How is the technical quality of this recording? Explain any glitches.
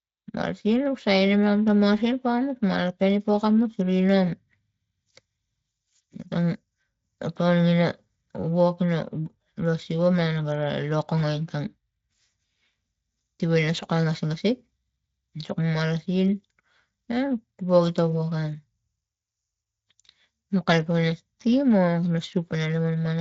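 No glitches or faults audible.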